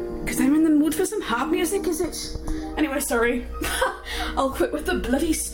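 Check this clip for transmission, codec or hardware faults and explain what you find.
One fault is present: channel delay, producing comb filtering, from 1.77 s to 2.77 s. During that second, one channel runs late relative to the other by roughly 0.2 ms, a few samples. When the two are summed to mono, content common to both cancels at evenly spaced frequencies, with the first notch near 3 kHz and further notches above it at regular intervals. The sound turns hollow and phasey, with dulled upper-mid detail, then returns to normal.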